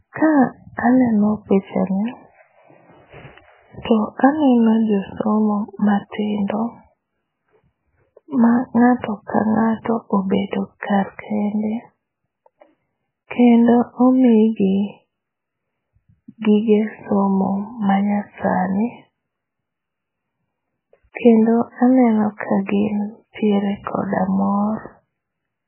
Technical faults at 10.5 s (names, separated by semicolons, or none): MP3 compression; pre-echo